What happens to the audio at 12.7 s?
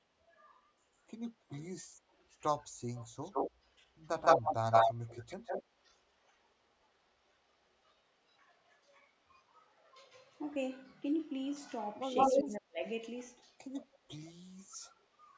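Around 12.3 to 12.8 s the speech drops sharply, by roughly 35 dB: speech suppressed in double talk, likely an echo canceller ducking the talker during overlap.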